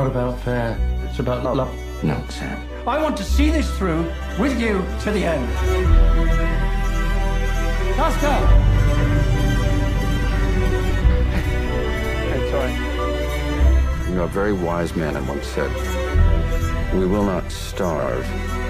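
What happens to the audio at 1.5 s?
Frames out of order: between 1.44 and 1.65 s, two neighbouring runs of about 93 ms each, which fits blocks of four frames, were decoded in swapped order. That stretch plays with its halves exchanged, giving a garbled flutter, and no time is lost.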